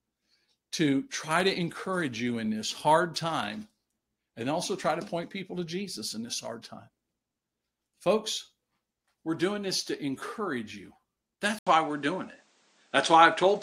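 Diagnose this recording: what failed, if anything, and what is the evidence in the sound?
At 11.59 s there's an 80 ms gap, then the speech runs duller, with nothing above 9.4 kHz. That's likely the input switched to a poorer device, a driver-level change.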